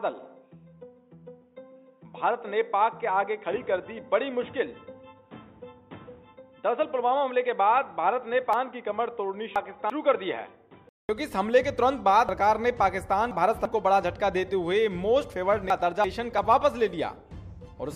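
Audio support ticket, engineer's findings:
Input switched to a poorer device, 0 to 11.09 s: band-limited and dull, nothing above 3.8 kHz, faint added noise floor, level unchanged. Likely a fallback mic or headset call profile; about 200 ms of silence at 11.09 s, full band returns after.

Chunks out of order at 8.53 to 9.90 s, 12.29 to 13.65 s, and 15.70 to 16.38 s: jumbled passages with hard joins. Buffering/write stage; 341 ms blocks played late, by three blocks twice, then one. Nothing lost, order wrong.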